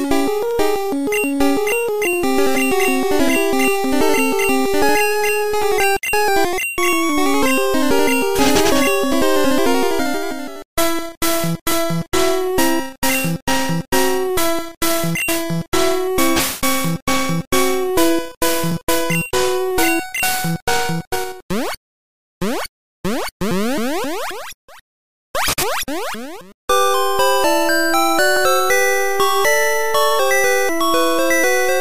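No technical faults are audible anywhere in the clip.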